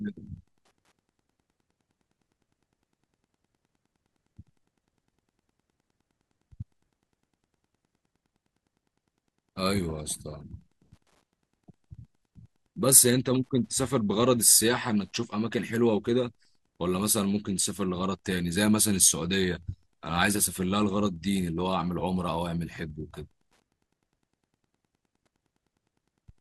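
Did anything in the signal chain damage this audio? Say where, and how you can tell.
Yes: Wi-Fi interference in the analogue wiring, a faint tick every 102.4 ms throughout, from a nearby radio's rectified beacon, drawing regular vertical lines on a spectrogram.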